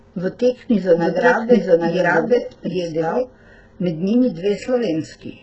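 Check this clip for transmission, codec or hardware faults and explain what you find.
Two faults turn up in this speech clip: low-bitrate codec damage throughout, and a second copy of the audio laid over part of it.

HE-AAC compression, throughout. The damage is heavy, which points to a very low bitrate, around 8 kbps. The likely culprit is HE-AAC, which spends its few bits on the lower band and synthesises the treble by copying lower bands upward under a rough envelope. Nothing is present above 8 kHz, and the top that remains is invented rather than captured. Sibilants come out gritty, metallic and lisped, with a brightness that doesn't match the voice beneath it.

Doubled audio track, from 0.98 s to 3.24 s. A second full-band copy of the audio runs roughly 0.7 s behind the original at about the same level. This is likely a slower capture path or an edit holding two copies out of step. 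Because the copy carries no decay or room colour, it sounds like a second, equally loud layer of the same speech rather than an echo. It cuts in and drops out abruptly at those two times.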